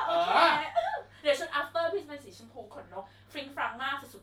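Nothing here sounds broken: the speech comes through steady and intact, with no technical faults to point to at any moment.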